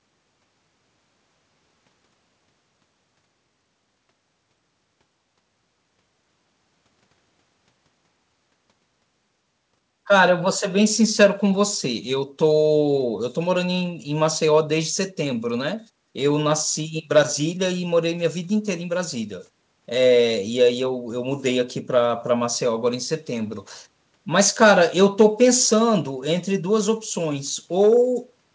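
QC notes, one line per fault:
No faults to note.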